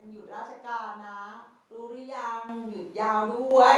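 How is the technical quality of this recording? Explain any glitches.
The recording has two sudden level jumps in the speech. Microphone volume stepped up at 2.49 s, by about 10 dB, and again at 3.51 s, by about 7 dB. The call software judged the microphone too quiet and raised the device's input volume in a single step each time. Because the change happens before any processing, the voice and the background noise floor jump up together, so the loudness lurches abruptly within the speech instead of rising smoothly.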